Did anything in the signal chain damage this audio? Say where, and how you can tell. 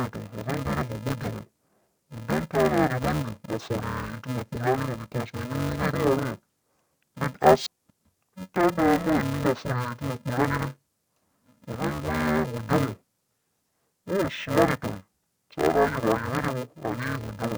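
Yes. Throughout the speech, interleaved audio is being read as planar at the sample-format conversion stage. The sound is dull and robotic with a steady buzz near 375 Hz and no clear octave drop. That fits 2.67 ms blocks of about 128 samples, each split into halves and played as left and right.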